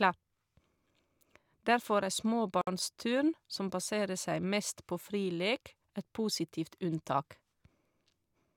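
At 2.61 s the speech breaks for about 59 ms, ending at 2.67 s. This is a gap at a join of encoded pieces: separately encoded segments, here spaced 6 s apart, were butted together without trimming the encoder's start-up delay and last-frame padding, so that silence stays in. Unlike a packet dropout, nothing is lost; the sound resumes exactly where it stopped, and the edges are smeared by the codec.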